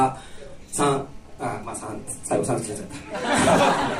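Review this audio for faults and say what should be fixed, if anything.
A GSM phone buzz runs from 1.04 to 3.84 s, about 32 dB below the signal: a steady, raspy 217 Hz tone with dense harmonics from rectified radio bursts during a call. Unlike mains hum at 50 or 60 Hz, it sits at 217 Hz and sounds harsh rather than smooth. Keep mobile phones away from the microphone, cables and preamp, or switch them to flight mode while recording.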